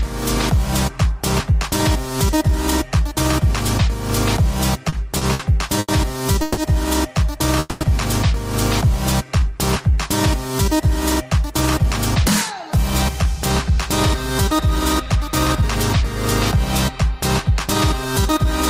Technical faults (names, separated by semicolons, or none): repeated stalls (stutter); call audio freeze; jitter buffer slow-down; jitter buffer speed-up